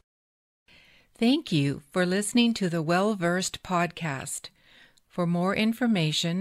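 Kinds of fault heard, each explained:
No fault can be heard anywhere in this speech clip. Nothing in the sound points to a problem in how it was captured or carried.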